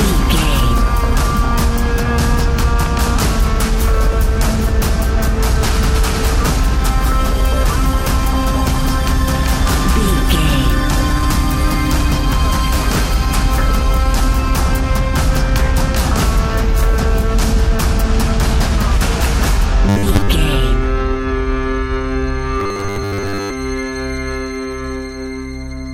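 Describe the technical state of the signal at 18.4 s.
At 18.4 s the signal is intact, with no audible technical fault at that moment.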